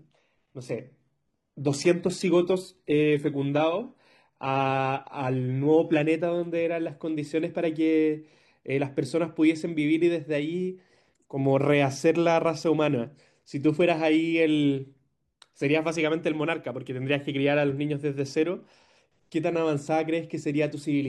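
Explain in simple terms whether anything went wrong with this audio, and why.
For the first 6 seconds the speech sounds dull and a bit smeary, with the crisp top end missing or replaced by a fizzy, fake-sounding sheen. Right at 6.0 s it snaps into clearer, fuller sound with no break at all. That's an adaptive stream starting at a low bitrate: the player grabbed a cheap, heavily squeezed version so playback could begin straight away, then switched up to a much better one once it knew the connection could handle it.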